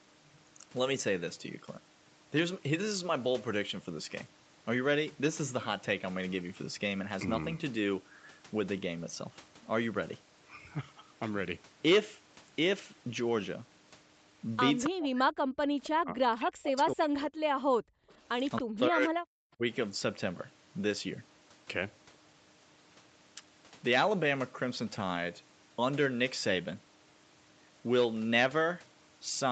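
From 14.86 to 15.44 s the talker's speech sinks sharply, by roughly 40 dB at its deepest, for about half a second. This is speech suppressed in double talk, likely because both ends were speaking at once and the echo canceller, unable to split the near voice from loudspeaker echo, turned everything down. Unlike gating, it is the talker's own voice that ducks.

At 15.83 to 15.89 s a brief echo leak appears: a faint delayed copy of the voice, trailing it by 271 ms and sitting about 20 dB below the direct speech. It likely comes from a loudspeaker-side echo canceller letting part of its microphone pickup through. What sets it apart from suppression is that something is added, a delayed copy of earlier sound, rather than taken away.

Double-talk suppression returns from 15.88 to 17.34 s, the longest stretch at about 1.5 s, again dipping roughly 40 dB.

From 17.64 to 18.09 s the background is gated by the echo canceller. 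The room tone drops by about 38 dB for roughly 0.4 s and then snaps back. Here the room sound vanishes, not the voice, which separates it from double-talk suppression.

A second echo leak at 18.56 to 18.61 s is louder, about 10 dB under the speech, at the same 271 ms delay. Suppression follows straight after, from 18.6 to 19.19 s at roughly 40 dB, and once more briefly from 19.54 to 19.64 s, a shallower dip of about 30 dB. Throughout, the band stops near 8 kHz, as the Opus call path and microphone processing shape it.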